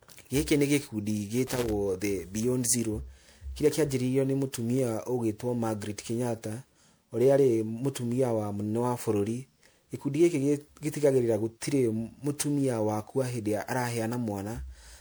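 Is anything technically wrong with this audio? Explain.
Yes, there are two faults. Throughout the clip the speech sounds swirly, smeared and hollow, with consonant attacks blurred and a watery churning that seems out of proportion to a moderate MP3 bitrate around 128 kbit/s. This is likely generation loss, from the audio having been decoded and re-encoded roughly seven times. Each pass quantises the signal again on a shifted frame grid, so the noise and missing spectral bands from every generation pile up instead of cancelling.

From 1.47 to 1.72 s there is an irregular burst of scratchy crackle, chopping the signal into rough fragments for about a quarter of a second. This is loose connector crackle: a worn or dirty contact somewhere in the signal path rapidly made and broke connection as it moved, interrupting the audio many times in quick succession. Any DC present on the line turns each break and remake into a pop, which builds the crackle.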